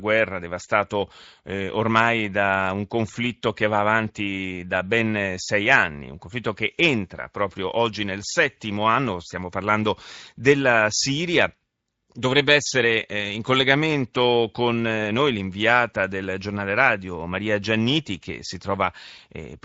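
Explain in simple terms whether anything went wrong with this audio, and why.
Nothing went wrong with this recording.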